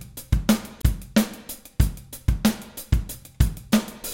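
At 0.82 s there is a CD skip. The laser pickup has lost its place on the disc's spiral track, typically after a knock or a surface flaw, and has landed on a different turn. The player mutes its output for roughly 15 ms while it reacquires the track, then resumes from the new position. It is heard as a brief tick or gap, after which the audio carries on from a point that does not follow on from where it stopped.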